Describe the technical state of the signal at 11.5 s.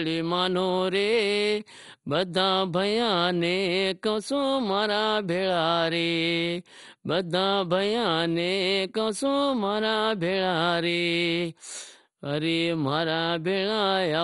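At 11.5 s the speech sounds dull and gurgling, with a granular, watery roughness and nothing audible above about 11.2 kHz. The damage runs through the whole clip rather than this moment alone. The likely cause is MP2 compression at a heavy setting, which fits a low bitrate around 56 kbps: Layer II divides the spectrum into 32 sub-bands, drops the top ones outright for lack of bits, lets bands flicker on and off, and quantises the rest coarsely.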